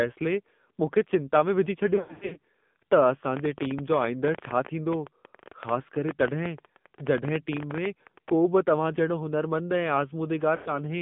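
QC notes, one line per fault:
Throughout: AMR narrowband mobile codec. The speech comes through as a phone line, band-limited to roughly 150 Hz to 3.6 kHz, so nothing bright survives above that. The codec's damage is plainly audible: the voice has a buzzy, synthetic edge, since the codec rebuilds it from a vocal tract model and a handful of pulses per subframe, and at the 7.4 kbps this fits there aren't many bits to spend on those.
1.96 to 2.38 s: lost AMR speech frames, right after "मूंखे चिंता में विझी". About 300 ms of frames drop out, scattered across 400 ms, with the longest unbroken gap around 100 ms. The decoder fills each hole by repeating the last good pitch and vocal tract settings at falling gain, so the sound goes warbly and smeared, dips toward silence in that longest gap, then returns a bit weak and rough.
10.56 to 10.79 s: lost AMR speech frames again, about 100 ms worth. 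Same concealment at work: the last good frame is stretched out and faded, giving a short drawn-out, fading dip before the speech recovers.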